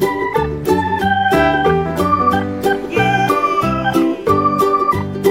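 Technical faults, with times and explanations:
Nothing stood out on listening.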